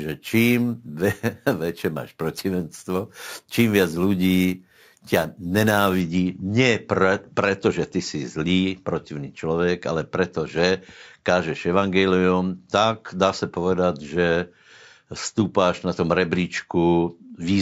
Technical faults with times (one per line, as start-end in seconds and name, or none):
0.00-6.00 imaging from sample-and-hold upsampling